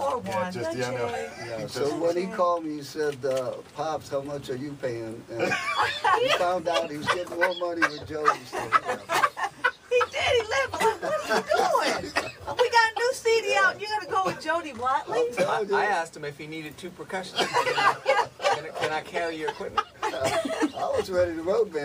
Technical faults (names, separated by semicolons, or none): none